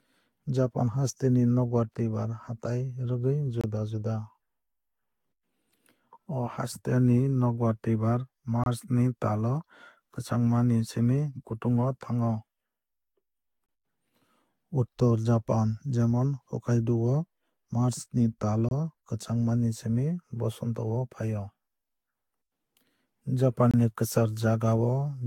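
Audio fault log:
throughout, generation loss: the sound is swirly, smeared and hollow, with blurred attacks and nothing above 17.9 kHz. That is worse than one encode near 64 kbit/s would give, likely from Vorbis re-encoding about four times, each pass quantising on a shifted frame grid.
3.61 s, 8.64 s, 13.66 s, 18.69 s, 23.71 s, gap between chunks: 25 ms silences recur after every 5.0 s chunk, for example between "haste ni nokbar twuibar" and "ni tal o kwchangma". Unlike a dropout, nothing is missing; the sound is only interrupted at each join.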